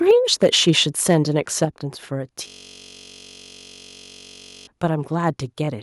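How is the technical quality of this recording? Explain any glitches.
The recording has three kinds of problems: harsh distortion on loud peaks, two abrupt drops in level, and a long stretch where the audio freezes into a buzz.

Microphone overload: At 0.09 to 0.11 s, 0.42 to 0.7 s and 1.09 to 1.15 s the loudest syllables take on a gritty, crackling edge. The cause is likely an input set too hot, driving peaks about 1, 4 and 2 dB past the converter's ceiling so their tops are flattened.

Microphone volume stepped down: At 0.11 s and again at 1.65 s the voice and background fall suddenly, by about 3 dB and then about 5 dB. This is likely the call software reacting to the clipping and lowering the device's input gain in a single step each time.

System hang loop: From 2.48 to 4.67 s the speech gives way to a steady buzz at 46.9 Hz. The system stalled while the sound hardware kept replaying one 21.33 ms chunk, which fits a 512-sample buffer, around a hundred times over, so about two seconds of audio are lost.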